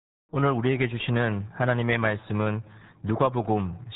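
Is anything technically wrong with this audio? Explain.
Yes. The speech runs through the RealAudio 14.4 codec for the whole clip. This early dial-up speech coder models the voice crudely and discards everything above 3.8 kHz, which fits an 8 kbit/s stream. The damage is heavy: the voice sounds muffled and gargly, with a watery, bubbling texture. A simple low-pass filter or telephone band would dull the top end but leave the voice smooth. Here the warbling, churning coding artefacts give it away.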